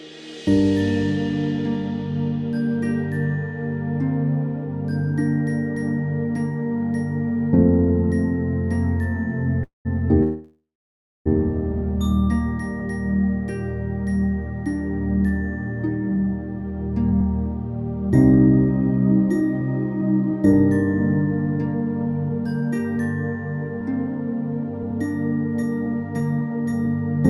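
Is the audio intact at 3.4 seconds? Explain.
Yes, the audio at 3.4 seconds is intact, with no dropout, click, distortion or other fault at that moment.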